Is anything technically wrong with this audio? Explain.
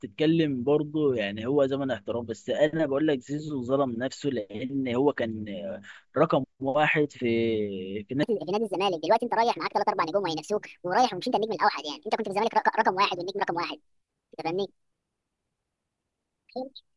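Yes, there's a wrong sample rate problem from 8.23 s to the end. The speech suddenly runs 1.5 times faster and jumps about seven semitones higher, sounding squeaky and rushed. That fits 16 kHz audio being played back at 24 kHz with no conversion.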